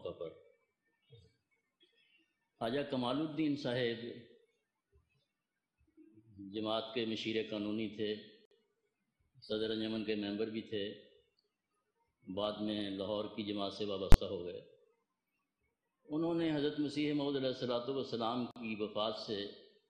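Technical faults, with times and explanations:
8.45–8.51 s and 18.51–18.56 s, gap at a join of encoded pieces: the sound drops out for about 57 ms, then 48 ms, ten seconds apart, and resumes where it stopped. Separately encoded pieces were joined untrimmed, leaving encoder start delay and last-frame padding, with codec-smeared edges.
14.12–14.14 s, invalid numbers at full scale: a single sharp bang. A calculation produced infinite or invalid values for a 20 ms block, which were forced to an extreme value and held flat, far beyond the surrounding audio, replacing the sound there.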